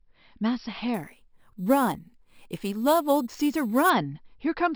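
From 0.94 s to 3.90 s the speech carries imaging from sample-and-hold upsampling. The audio points to a 12 kHz signal raised to 44.1 kHz by simply repeating each sample, with no interpolation filter to remove the mirrored spectrum. The first image fills the 6 kHz to 12 kHz band at about 20 dB below the signal, heard as a bright metallic fizz that tracks the loudness of the speech and slides downward as pitch rises.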